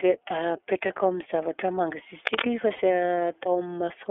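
The speech passes through the iLBC codec across the whole clip. Its narrowband coding keeps only about 300 Hz to 3.5 kHz, and the frame-by-frame excitation coding, which points to the 13.33 kbps mode with 30 ms frames, leaves the speech muffled, slightly rough and plainly synthetic.

At 0.86 to 0.90 s, lost iLBC frames force the decoder to conceal a gap consistent with one 30 ms frame. It repeats the last pitch cycle blended with noise, so the sound briefly turns into a held, faintly buzzy vowel before recovering almost immediately.

From 2.25 to 2.42 s, cable scratch noise appears, likely from a worn cable or connector shifting and changing its contact resistance. Dense, uneven bursts of scratching and rustling sit on top of the speech at about the same level as the speech itself.

At 2.76 to 2.80 s, lost iLBC frames occur again. Another single missing frame is filled with a repeated, noise-mixed pitch cycle, heard as a short breathy, buzzy hold. 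Because iLBC frames are coded independently, normal decoding resumes right after.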